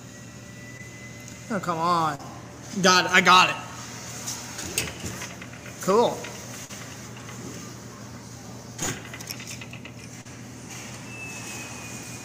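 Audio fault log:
0.77–0.81, 2.15–2.21, 6.65–6.71, 8.83–8.89 and 10.21–10.27 s: short concealed packet loss. 20 ms, then 40 ms each time, never arrived, so the receiver stretched the previous sound across the gap and blended back, leaving a brief smear.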